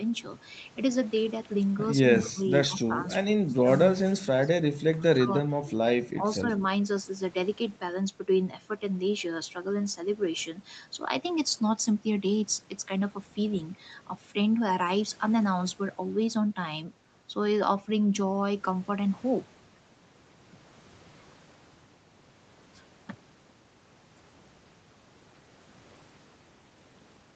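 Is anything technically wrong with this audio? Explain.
Yes, there are two problems in this speech clip.

From 2.14 to 2.29 s there is an echo leak: a faint copy of the speech, about 20 dB down and 137 ms late, is likely left over by a loudspeaker echo canceller. On a spectrogram it appears as a weak, time-shifted ghost of the speech harmonics.

Speech suppressed in double talk dips the speech at 2.22–2.42, 2.67–3.04, 3.27–3.56, 4.00–4.52, 4.72–5.30, 5.49–5.72 and 6.14–6.23 s. The drops are as deep as 30 dB, likely because the echo canceller attenuated everything while both sides talked. In the waveform these show as sudden envelope troughs.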